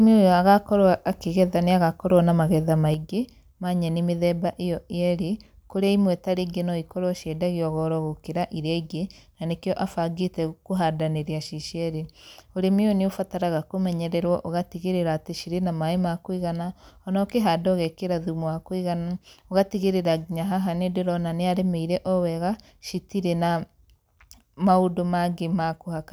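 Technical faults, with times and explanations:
2.94 s to the end: one channel drops out. The speech suddenly gets about 6 dB quieter and stays there. That step is what you'd hear if one side of a stereo feed likely went dead. Once it's folded to mono, the shared centre content loses half its level, and anything that lived only on the missing side is gone.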